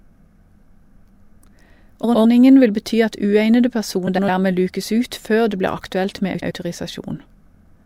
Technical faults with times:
2.03-2.25 frames out of order
4.07-4.29 frames out of order
6.34-6.51 frames out of order

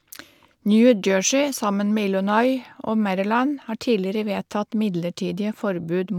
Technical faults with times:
none

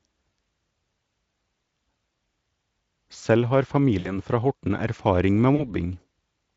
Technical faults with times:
3.99-4.17 VoIP packet loss concealed by the speech codec
5.55-5.79 VoIP packet loss concealed by the speech codec

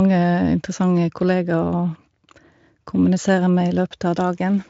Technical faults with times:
none

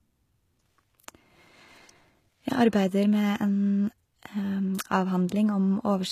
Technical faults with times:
0.00-6.11 HE-AAC compression

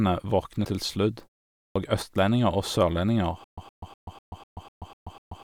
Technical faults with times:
0.61-0.66 damaged data in a compressed stream
1.69-1.76 clipped start after a pause
3.44-5.43 stutter with silent gaps

